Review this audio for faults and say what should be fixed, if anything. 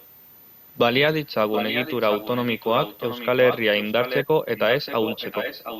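A switching supply whistle runs through the whole clip, a thin high tone wandering between 13.8 and 14.1 kHz, roughly 30 dB below the speech. On a spectrogram it is a faint, slightly wavering horizontal line. Better supply filtering or shielding near the audio path would prevent it.

An echo leak brings back a delayed copy of the speech 725 ms late at 1.52–1.95, 2.12–3.62, 3.80–4.25, 4.56–4.60 and 4.86–5.80 s. It is likely from a far-end loudspeaker the echo canceller failed to suppress. Proper echo cancellation or headphones would prevent it.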